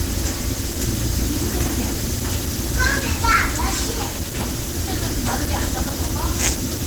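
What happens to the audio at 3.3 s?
At 3.3 s the sound carries the same plainly audible Opus compression damage heard across the whole clip: rough, grainy texture where the encoder filled starved bands with noise. This likely comes from the hybrid mode at a low bitrate near 16 kbps. Unlike MP3, it has little swirling.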